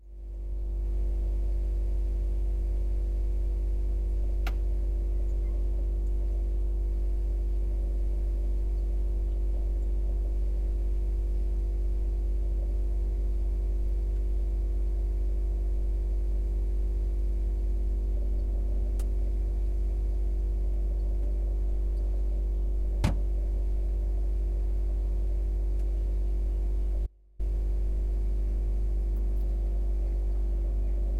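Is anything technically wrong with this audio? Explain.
Yes, there is an audio dropout to a faint residue from 27.07 to 27.39 s. The sound cuts abruptly to a leak roughly 30 dB down, likely because the signal was lost while the path stayed live. Its hard edges set it apart from a pause or fade.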